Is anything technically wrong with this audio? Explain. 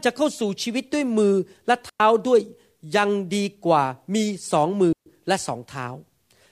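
Yes. A digital wireless dropout occurs twice in this speech, at 1.89 to 2.00 s and again at 4.93 to 5.06 s. Each time, the radio link lost too much data for the receiver to recover, so it muted the output with a very quick fade. The result is a clean hole of near silence, about 105 ms and then 135 ms long, with no crackle or noise burst on either side.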